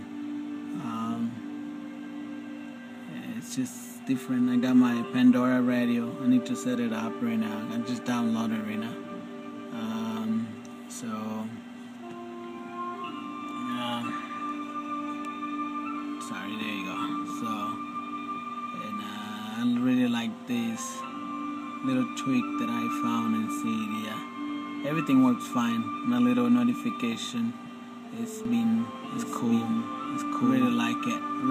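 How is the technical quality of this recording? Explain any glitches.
The recording has one clear fault near the end. From 28.45 s to the close, a doubled audio track appears. A second copy of the sound plays about a second behind, roughly as loud as the original. It cuts in abruptly, with no decay or room colour. It is likely a second capture through a slower path, or an edit holding two copies out of step.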